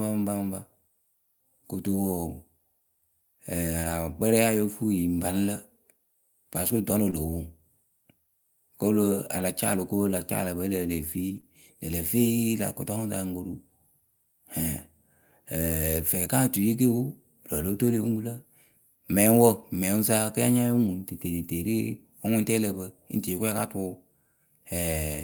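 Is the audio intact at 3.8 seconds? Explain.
No. From 3.83 to 3.93 s a lost packet is rebuilt from error correction: low-bitrate backup copies fill the gap, sounding rougher and noisier, with a blurred, grainy patch on a spectrogram.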